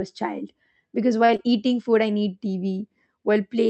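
At 1.25 to 1.30 s there is a short stall from a late packet. The jitter buffer ran dry, so the receiver held the current sound for about 30 ms and then resumed from the same point. Nothing is lost, only drawn out, with a faint buzz or dip, and everything after arrives 30 ms later.

At 1.36 to 1.40 s comes a short concealed packet loss. About 20 ms of audio never arrived, and the receiver replaced it with an extrapolation of the preceding sound before blending back. Unlike the stall, that stretch is gone rather than delayed, heard as a brief smear or wobble where detail drops out. Both events sit on audio passing through an Opus call path limited to about 8 kHz.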